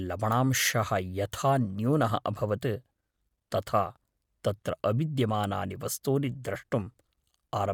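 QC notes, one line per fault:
Throughout, Bluetooth LC3 compression: the speech has a plainly audible breathy, grainy edge, with the upper band sounding noise-filled rather than detailed. That's likely LC3 coding at a modest rate, consistent with 10 ms frames around 48 kbps, though content still reaches 20.2 kHz.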